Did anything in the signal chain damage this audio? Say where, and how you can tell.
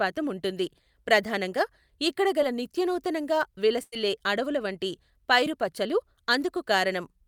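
Yes, and it's the network stage. There's short concealed packet loss at 2.41 s and again at 5.45 s. About 10 ms of audio never arrived in time each time, and the decoder covered it by extending the preceding sound before blending back, which leaves a tiny smear or wobble.

The bigger hit, from 3.83 to 3.93 s, is a burst of packet loss. Roughly 90 ms went missing, and the receiver stretched the last sound across the gap while fading it down. You hear a held buzz or fading hiss, then the speech jumps ahead.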